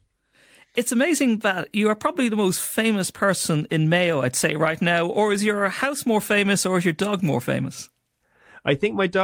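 Speech recording, with no technical fault audible anywhere in the clip.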